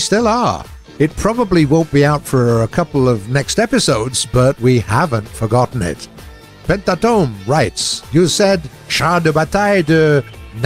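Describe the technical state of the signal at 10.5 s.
The audio at 10.5 s is intact, with no technical fault present at that moment.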